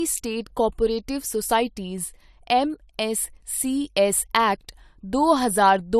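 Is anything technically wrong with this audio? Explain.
Yes. Throughout, this is low-bitrate audio saved at a high bitrate: nothing exists above 14.1 kHz, a cut-off a high-bitrate encoder would not impose, so the clip was likely re-encoded from a low-bitrate source.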